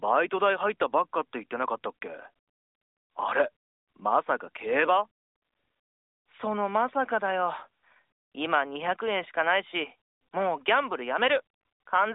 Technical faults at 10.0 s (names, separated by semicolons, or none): none